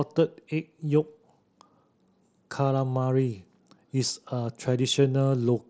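No technical faults are present in the speech; it carries the band-limited character of a Bluetooth mSBC headset link, with content reaching up to about 8 kHz.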